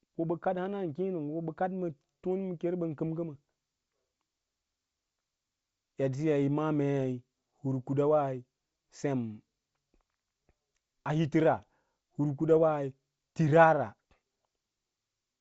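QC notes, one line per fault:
No faults found in this speech clip.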